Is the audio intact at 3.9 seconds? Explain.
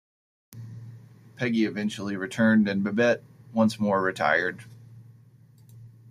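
Yes, the speech at 3.9 seconds is intact, with no audible fault at that moment.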